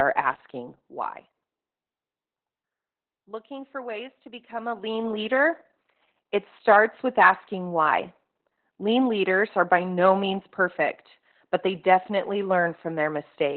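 Throughout this speech clip, Opus voice compression at a very low rate, about 8 kbps in SILK mode, leaves heavy codec damage. Nothing is left above about 4.2 kHz, so the sound is muffled, hoarse and faintly robotic, unlike plain low-pass filtering, which dulls without that coarse, buzzy excitation.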